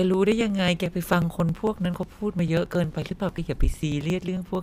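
A USB or driver stall recurring every 0.09 s skips about 10 ms of this speech each time, giving periodic USB or driver dropouts: around fifty regular dropouts, heard as ticks wherever speech is present, from 0.14 s to 4.55 s.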